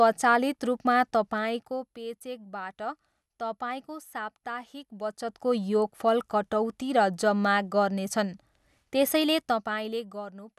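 Speech recording, no technical faults found.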